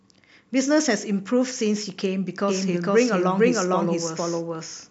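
A doubled audio track begins abruptly at 2.48 s and runs to the end of the clip. From that point, a second full-band copy of the speech follows about half a second behind the original, at roughly the same level, with no decay or added room colour. The cause is likely the same signal reaching the mix twice, once through a slower path, so every syllable is heard again as a hard, overlapping repeat.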